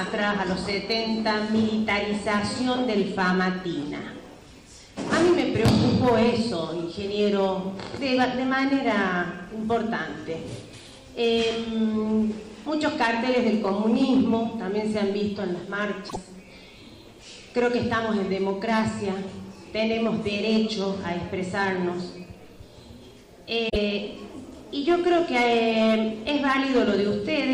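At 16.05 s the sound breaks briefly for about 0.12 s. It is damaged data in a compressed stream. Some bytes in the encoded file were lost or overwritten there. The decoder misreads those frames and loses sync. It then hunts for the next valid frame header. The same fault returns at 23.66 s for about 0.11 s. Both are short squawks or blips that break into the sound.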